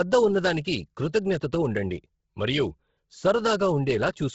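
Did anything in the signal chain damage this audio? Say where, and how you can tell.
Yes. At the codec stage, the speech is band-limited to about 7.7 kHz throughout, with a breathy, grainy noise fill in the upper band. A plain low-pass would sound clean; this is likely heavy Bluetooth LC3 compression, fitting roughly 16 kbps with 10 ms frames.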